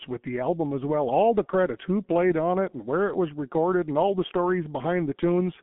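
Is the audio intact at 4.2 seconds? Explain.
No, at 4.2 seconds you're hearing the same G.723.1 codec damage that runs through the whole clip. Everything above about 3.8 kHz is gone and the band sits roughly between 150 Hz and 3.4 kHz, so the speech comes across muffled. The coarse, slow-updating voice model, which fits a rate around 6.3 kbit/s, makes it sound hoarse and smears the consonants. It's heavy damage here, not a subtle tint.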